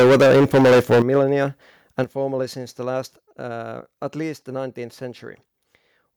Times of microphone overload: 0.00-1.43

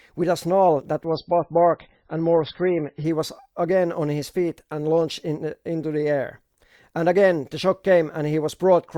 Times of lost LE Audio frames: none

